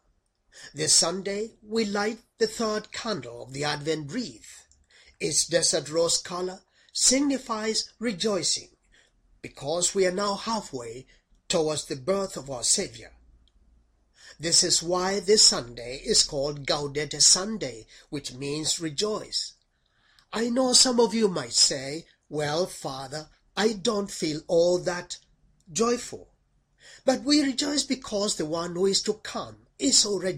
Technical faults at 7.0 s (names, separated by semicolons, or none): none